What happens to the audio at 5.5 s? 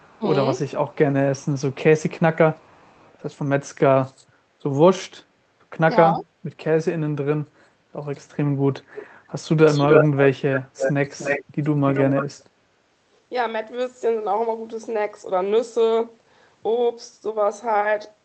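Nothing goes wrong at 5.5 s: the speech carries on intact through the call path, with only the band-limited, coded character it has throughout.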